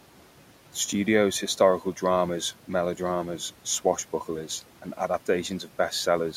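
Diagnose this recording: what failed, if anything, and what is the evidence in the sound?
The fault is in call processing: noise suppressor artifacts, present for the whole clip. The room noise sits about 20 dB below the speech. Between phrases it drops away by about 12 dB, then swells back up under the speech. The suppressor estimates the steady noise in each band. Frame by frame, it pulls those bands down where it judges only noise is present.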